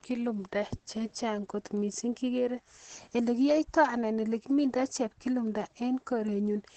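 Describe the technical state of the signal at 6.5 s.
At 6.5 s the speech is likely passing through heavy Opus compression in its SILK speech mode, as it is for the whole clip, at a rate that points to around 12 kbps. Nothing survives above 8.4 kHz, so the voice sounds muffled, hoarse and band-limited.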